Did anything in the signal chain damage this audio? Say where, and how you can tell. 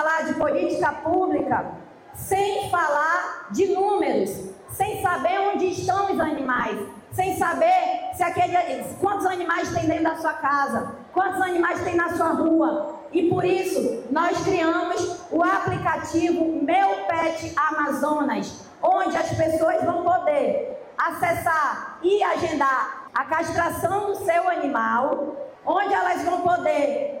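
Yes, at disc playback: CD scratch ticks, three regular clicks from 14.98 to 15.40 s, seen as vertical spectrogram lines, one per revolution where error correction failed.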